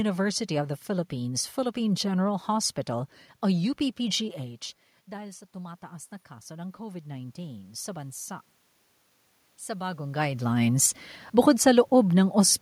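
In this speech clip, the automatic gain control reacted to a quieter input, a drop of about 17 dB when the talker moved away around 4.5 s, by raising its gain about 6 dB from 4.31 to 8.26 s. The voice and the room noise swell up together over those four seconds. The talker shifts again around 10 s.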